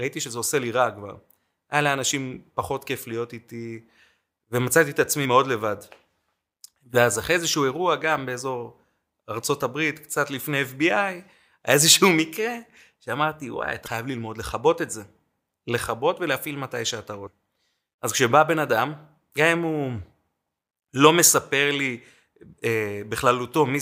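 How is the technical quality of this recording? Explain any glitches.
The recording has three short glitches, all damaged data in a compressed stream, at 5.21–5.26 s, 13.83–13.88 s and 17.23–17.27 s. Each is a roughly 40 ms glitch in the speech, where corrupted bytes made the decoder misread a frame and lose sync before it locked onto the next one.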